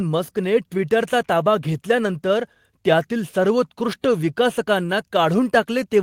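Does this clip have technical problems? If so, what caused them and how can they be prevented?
No, no technical faults heard.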